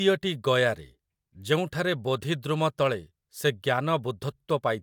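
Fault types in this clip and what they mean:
Nothing stood out on listening to this speech clip.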